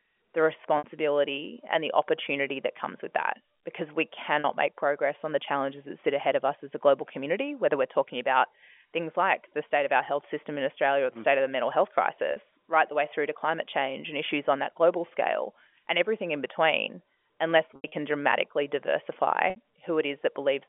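Packet loss with pitch repetition at 0.78, 4.40, 12.32, 17.76 (scattered over 160 ms) and 19.50 s: the receiver fills 40 to 80 ms gaps by repeating pitch periods, which sound like brief buzzy holds on the shorter gaps, while longer ones fade into silence before the speech returns.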